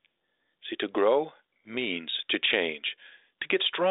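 Listening to this speech recording, nothing technical stood out as a problem; it has the narrow band of telephone audio, with nothing above about 3.8 kHz.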